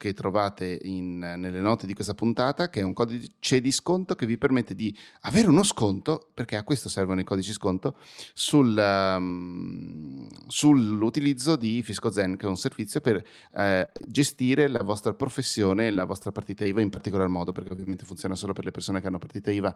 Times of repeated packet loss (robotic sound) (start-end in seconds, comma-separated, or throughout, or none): 13.85-14.81, 17.52-17.94